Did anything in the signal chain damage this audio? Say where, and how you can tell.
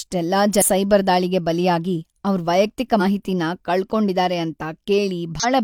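Yes. Damaged data in a compressed stream, a codec-stage fault, at 0.58–0.63, 2.97–3.01 and 5.40–5.45 s: brief disturbances where corrupted frames made the decoder lose sync.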